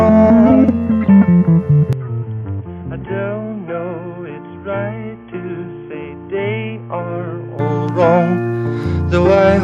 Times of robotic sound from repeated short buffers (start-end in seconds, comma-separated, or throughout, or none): none